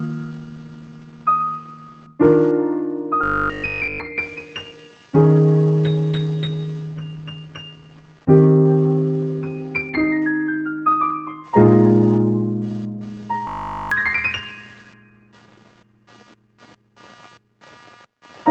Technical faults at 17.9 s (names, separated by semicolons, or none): computer activity noise; noise suppressor applied to music or sounds; sound cut by the noise suppressor